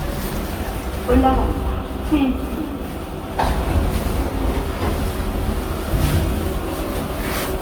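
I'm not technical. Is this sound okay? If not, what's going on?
No, it has generation loss throughout: everything sounds swirly, hollow and smeared, likely from being compressed and re-saved around seven times over.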